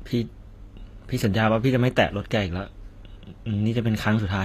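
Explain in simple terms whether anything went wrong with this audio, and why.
The whole recording has a gritty, metallic edge on its s sounds, and nothing at all above about 14.9 kHz. That points to HE-AAC compression, likely at a low data rate, which rebuilds the treble from copied lower frequencies, so the top end sounds synthetic.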